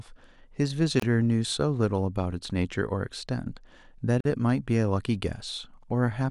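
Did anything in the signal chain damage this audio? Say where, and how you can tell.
Yes, codec stage: gaps at joins of encoded pieces. Speech drops out for 27 ms at 1.00 s and 46 ms at 4.21 s, which is untrimmed encoder delay and padding.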